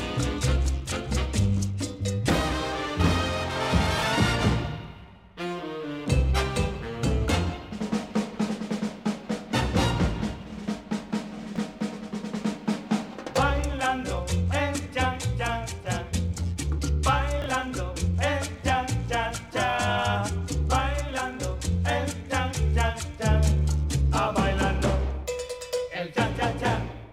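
At 3.98 to 4.02 s, 11.5 to 11.58 s and 17.42 to 17.46 s there are chunks out of order: a 20 ms block of sound plays late, after the block that should follow it, one chunk late in the first and last cases and three chunks late at 11.5 s. Nothing goes missing, but each swap leaves hard joins, and the sound briefly jumbles, with the longest scramble lasting 80 ms.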